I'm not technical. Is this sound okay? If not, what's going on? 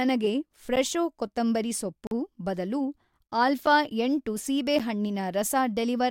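No. The speech has four brief blocks of digital silence. At each one, the sound cuts to total silence and snaps back with no fade. At 0.76 s, 3.66 s and 4.79 s you hear a tick. From 2.07 to 2.11 s there is a short hole.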